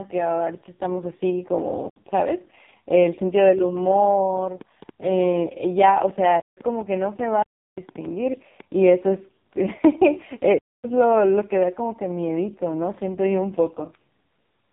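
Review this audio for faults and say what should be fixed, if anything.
The speech has been through the AMR narrowband mobile codec at the lowest 4.75 kbps mode. The vocal-tract model gets so few pulses per 5 ms subframe that the voice turns buzzy and synthetic, and nothing above about 3.8 kHz survives, leaving a muffled, telephone-like band. Route the call or recording over a wideband path, or at least a higher AMR mode, so the codec can carry more detail.

From 2.96 to 8.61 s a train of clicks runs at about 5.1 per second with uneven spacing, some thirty ticks in all, peaking roughly as loud as the speech itself and audible in the pauses too. The likely source is electrical interference from nearby equipment or a faulty connection or power supply injecting similar-shaped pulses. Shield or separate the cabling from other gear and check the connections and power supply.

Two blocks of digital silence cut the signal out with no fade, leaving a clear hole. 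The first runs from 6.40 to 6.57 s (about 171 ms, which fits an 8192-sample buffer left unfilled), and the second from 10.58 to 10.84 s (256 ms). The output buffer was likely not filled in time. Give the audio process larger buffers or higher scheduling priority so it never misses a deadline.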